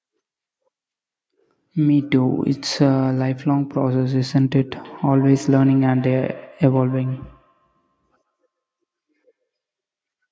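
From 4.82 s to 9.45 s the speech carries a feedback echo between two devices. A second device in the same room is replaying this call, and this microphone picks that playback up again. The local echo canceller removes only its own device's output, so the loop closes. Each syllable returns at a fixed interval of roughly 150 ms, peaking about 20 dB below the speech, thinner and more ringing than the original. Room reverberation would instead smear into a smooth decaying tail.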